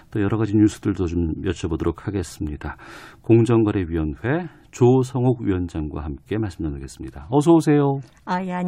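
No technical faults can be heard anywhere in this speech recording. There is nothing to place in time, so no events are listed.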